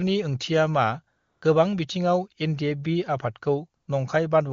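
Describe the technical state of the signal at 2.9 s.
At 2.9 s the speech signal is intact, with no dropout, distortion or other fault at that moment, and the AMR wideband (HD Voice) coding leaves the sound there clear.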